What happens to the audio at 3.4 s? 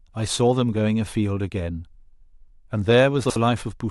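Around 3.4 s the speech is briefly scrambled by chunks out of order, spanning 3.24 to 3.36 s. One 60 ms chunk arrives a chunk late and plays after the one meant to follow it. Nothing is lost. The swap leaves a jumbled moment with three hard joins.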